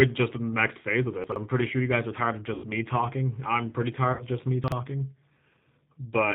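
G.729 codec damage runs through the whole speech clip and is plainly audible. Everything above 4 kHz is gone, and the voice has the slightly rough, synthetic grain of speech rebuilt from a vocal tract filter, a pitch predictor and a few pulses per 10 ms frame. That character fits an 8 kbit/s G.729A-type encoding.

Chunks out of order first appear from 1.24 to 1.36 s, between "the next phase of" and "I'm pretty sure you". A 40 ms piece of audio plays two chunks later than it should, so the sound briefly jumbles and three hard joins fall within those 120 ms.

VoIP packet loss concealed by the speech codec follows at 2.54 to 2.69 s, between "guys are tired of" and "talking I'm pretty". About 100 ms of audio is missing, which fits five lost 20 ms packets. The decoder stretches its last pitch and filter into a fading buzzy tone or coloured noise, and the voice stays weak as it recovers. A second, shorter concealment at 4.13 to 4.23 s covers 60 ms, which points to three lost packets, and has the same fading concealment.

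Chunks out of order return at 4.64 to 4.72 s, just after "just me". Here a 40 ms chunk plays one chunk late, giving a brief garbled swap.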